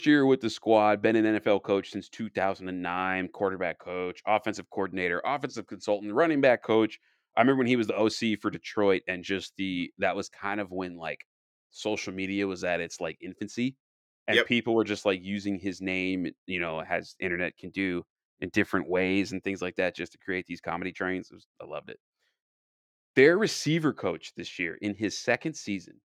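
At 18.55 s in this speech recording, fresh audio failed to reach the playback device in time, so it replayed its last buffer instead, a repeated buffer fault. The same slice of about 1.45 ms, which fits a 64-sample buffer, sounds three times in a row with a hard join at each restart. Because the piece is so short, the repeat comes across as a tiny click or brief buzz rather than a stutter, and essentially nothing is lost from the audio.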